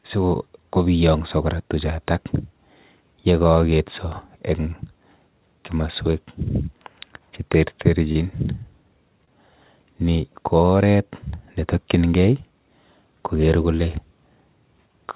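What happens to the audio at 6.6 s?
Nothing goes wrong at 6.6 s: the speech there is intact, carrying only the narrow telephone-band character of the call codec path, with nothing above 4 kHz.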